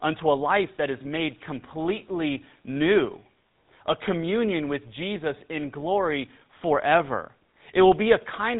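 GSM full-rate codec coding runs throughout the speech, from start to finish. The codec rebuilds the voice from a vocal-tract model fed by a regularly spaced pulse excitation that retains only one sample in three, so the fine detail of the source is lost. The result is a plainly audible buzzy, gravelly roughness on every voiced stretch, with nothing above about 3.9 kHz, which fits a 13 kbps full-rate link.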